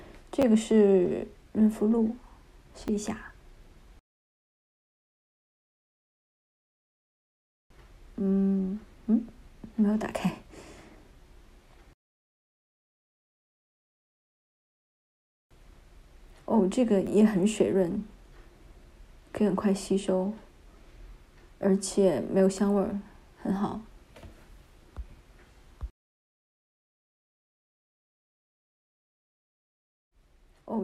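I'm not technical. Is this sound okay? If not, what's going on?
No. There are quick little clicks or buzzy stutters at 0.42 to 0.44 s, 2.88 s and 17.07 s. This is a repeated buffer: new sound arrived late, so the player replayed its last tiny chunk, about 11 ms long, which fits a 512-sample buffer.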